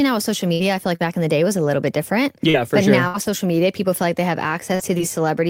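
At 0.53 s a burst of packet loss begins. About 60 ms of audio never arrived in time. The receiver filled the hole by stretching the last sound it had and letting it fade. That gives a held, thinning stretch instead of new material. The timeline then jumps ahead, and the missing slice is simply gone.

From 0.59 to 0.61 s, the tail of that gap is a lost packet rebuilt from error correction. A later packet carried a low-bitrate spare copy of these 20 ms. The decoder played that copy, so there is no silence. The frame sounds coarser and noisier than its neighbours.

At 0.95 s there is a short concealed packet loss. About 40 ms failed to reach the decoder. The gap was bridged by continuing the preceding sound and then blending back into the real signal. It is heard as a brief smear or wobble, not a dropout. Any very short sound falling inside it can vanish.

At 1.00 s, the last 20 ms of that hole is again a frame rebuilt from error correction. 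The rough, noisier texture of the low-bitrate copy marks it.

From 2.12 to 5.01 s come scattered short gaps. Roughly five separate gaps occur across this stretch. The longest is around 70 ms. About 7 percent of the span is patched guesswork. Each hole is covered by carrying the last sound forward, so the audio keeps moving. Brief ticks, smears and hiccups break into it at irregular points. Several patched frames carry the rougher grain of error-correction copies.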